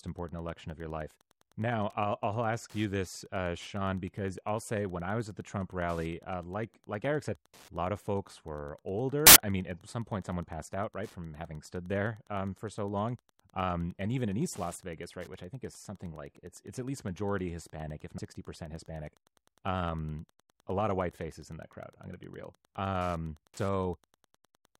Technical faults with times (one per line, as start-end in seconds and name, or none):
0.00-24.80 Wi-Fi interference
9.27-9.39 corrupt FLAC frame
18.18-18.28 compressed frames skipped